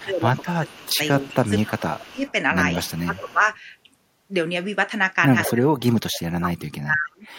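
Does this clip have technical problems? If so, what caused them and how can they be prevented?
Yes. From 0.0 to 2.25 s, 3.05 to 3.42 s and 5.47 to 7.27 s the speech dips, by roughly 10 to 40 dB and deepest near the end. This is likely speech suppressed in double talk, with the echo canceller turning down this side's voice along with the loudspeaker echo while the far side talked. Tuning the canceller's double-talk detection, or using headsets so there is little echo to remove, prevents this.

A delayed copy of the speech trails it by 201 ms, from 0.41 to 1.78 s, around 2.27 to 2.32 s, from 2.74 to 3.33 s and at 5.45 to 5.51 s. It sits roughly 10 to 35 dB below the main speech, quietest near 2.3 s and loudest near 5.5 s. This is likely an echo leak, with a loudspeaker's output getting past the far end's echo canceller and returning. Switching that side to headphones, or lowering its speaker volume so less echo reaches its microphone, prevents it.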